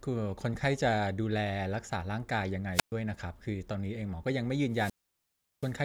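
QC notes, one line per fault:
2.73–2.92 s, wireless microphone squelch dropout: the radio link fades, a quick swell of hiss comes up, then the receiver's squelch slams the output shut for about 121 ms before the speech comes back.
4.70–5.75 s, wireless microphone squelch dropout again, much worse: the hiss builds as the signal weakens, and the squelch then holds the audio muted for 730 ms, leaving a real hole near the end.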